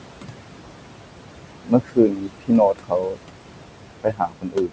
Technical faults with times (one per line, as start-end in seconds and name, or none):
0.00-4.72 noise suppressor artifacts
1.41-3.19 speech cut by the noise suppressor
4.03-4.72 speech cut by the noise suppressor